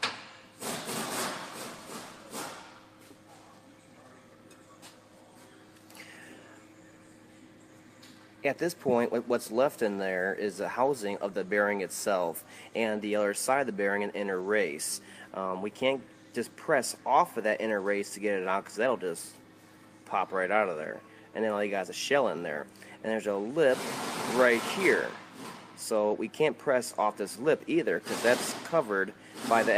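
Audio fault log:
Nothing to log here, the audio runs along without a single problem turning up anywhere.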